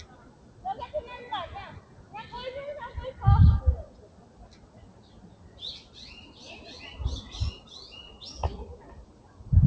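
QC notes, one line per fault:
Throughout: noise suppressor applied to music or sounds. A speech-tuned suppressor treats steady sound as noise, so levels pump with a gain swing of roughly 15 dB.
0.06–0.63 s, 1.81–2.14 s, 3.89–5.59 s, 8.77–9.42 s: sound cut by the noise suppressor. Held or fading sound gets pulled down by up to about 7 dB (about 6 dB at 1.81 s), thinning tails.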